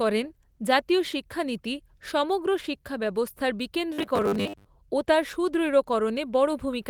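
Speech clip. From 3.94 to 4.66 s, after "শিক্ষানীতি সমগ্র শিক্ষা ব্যবস্থার" and before "ও তার", it turns into a rigid metallic buzz at 100 Hz. This is robotic sound from repeated short buffers. The likely cause is roughly 10 ms buffers repeated for about half that stretch.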